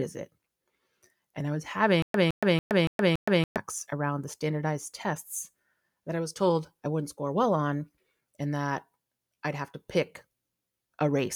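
Speech clip with one fault, a stutter with silent gaps, from 2.02 to 3.57 s, right after "and I was" and before "around the standardized tests". A burst of about 163 ms repeats five times, each followed by roughly 120 ms of dead digital silence, giving an even cycle of about 283 ms. The likely cause is a stalled player or stream replaying its last buffered fragment on each retry, so the audio due in that span is lost.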